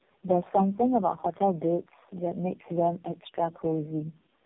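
Speech, with tandem speech coding throughout. It sounds rough, muffled and warbly, with nothing above 3.7 kHz. Each coder re-encodes the last one's damaged output. The repeated smearing fits three low-rate AMR-NB passes, with G.711 links between them.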